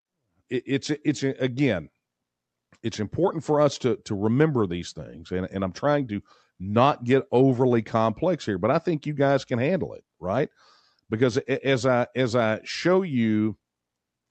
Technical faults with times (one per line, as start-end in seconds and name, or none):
none